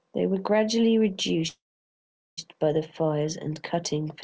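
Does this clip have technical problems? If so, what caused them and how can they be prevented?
Yes. A call audio freeze runs from 1.48 to 2.39 s, likely because delayed packets emptied the jitter buffer. After "were gradually", the sound fades into about 0.78 s of silence, then resumes intact at "by the fires and", now running about 0.9 s later. Preventing it means giving the call a steadier network route with less congestion, or allowing a deeper adaptive jitter buffer to absorb the delays.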